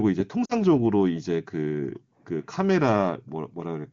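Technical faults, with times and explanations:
0.45–0.54 s, lost AMR speech frames: a 40 ms gap, which fits two lost 20 ms frames on the AMR-WB link. The decoder reused the last good pitch and vocal tract settings with falling gain, so the sound smears and sinks toward silence, then returns weak or rough.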